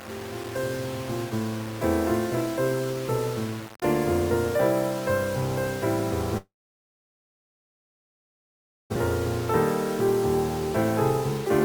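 Throughout the clip, the signal was likely reduced to about 5 bits by plain rounding, with no dither to break up the error. Because the rounding error tracks the waveform, it becomes a grainy, rasping distortion that shifts with the sound. It sits only around 15 dB below the signal, so quieter passages turn coarse and gritty, and the softest moments collapse toward silence or sputter between the few available levels. This is low bit depth without dither.

From 6.37 s to 8.98 s there is a long network dropout, most likely a stall in packet delivery during which nothing usable reached the receiver. The receiver briefly extends the last sound as a short fading tail, then holds near-silence for roughly 2.4 s. When the audio returns, about 1.6 s of material is gone, and playback resumes later in the stream with a delay shift of roughly a second.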